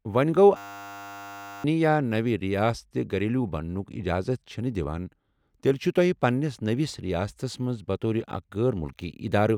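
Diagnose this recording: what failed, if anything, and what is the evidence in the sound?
A system hang loop at the driver or buffer stage: from 0.57 to 1.64 s the speech freezes into a steady 100 Hz buzz, one 10 ms slice repeating over a hundred times. The hardware kept replaying a stalled ring buffer, losing about a second of audio.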